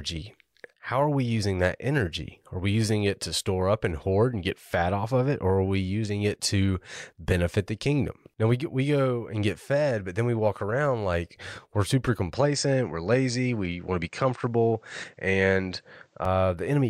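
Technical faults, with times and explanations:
12.34–16.25 s, input switched to a poorer device: after "around like we're super" speech abruptly dulls, with nothing above 8.7 kHz and faint new hiss, likely from a narrower-band microphone.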